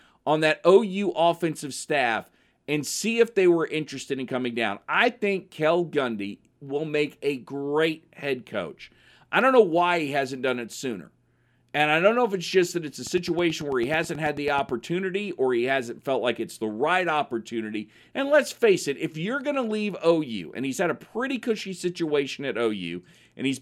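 From 13.07 to 14.70 s a train of clicks ticks over the speech, about fifteen regular pulses at 9.2 per second, roughly as loud as the speech, likely from electrical interference.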